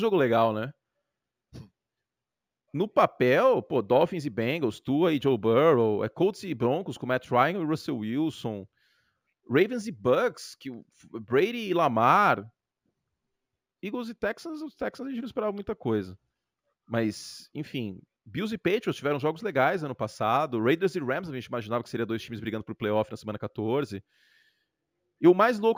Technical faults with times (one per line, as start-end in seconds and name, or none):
0.00-25.77 imaging from linear upsampling